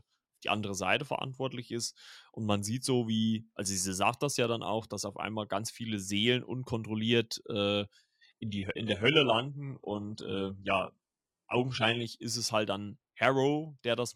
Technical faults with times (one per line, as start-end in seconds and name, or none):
8.04-12.04 adaptive stream at a lower bitrate